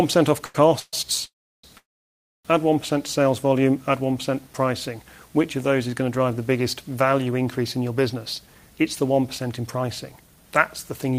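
At 0.45 s there is a short stall from a late packet. The sound is held for about 90 ms until 0.55 s. The jitter buffer ran dry, so the last sound was stretched. Nothing is lost. The sound simply drags briefly.

Three call audio freezes follow, from 0.79 to 0.94 s, 1.26 to 1.64 s, and 1.77 to 2.46 s. They last 133, 378 and 671 ms. Each starts as a fading held buzz or hiss, then goes silent for 40, 330 and 630 ms. The likely cause is packets held up in transit. The audio then resumes where it stopped.

From 8.14 to 11.13 s a jitter buffer speed-up runs the audio at about 107% speed. The receiver trimmed many tiny pitch-period slices to shed excess delay, about a fifth of a second in total. Pitch stays the same, but the sound feels hurried.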